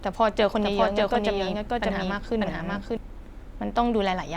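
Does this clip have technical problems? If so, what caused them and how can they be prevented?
Yes. From 0.59 s to 2.97 s the speech carries a doubled audio track: a second, full-band copy of the same speech runs around half a second behind the first, at close to the same loudness. The copy has no decay or room colour and cuts in and out abruptly at those times, so it sounds like a pasted echo. It was likely caused by the signal being captured twice, once through a slower path, or by an edit leaving two misaligned copies. To prevent it, route each source through a single capture path and check edits for overlapping duplicate regions before export.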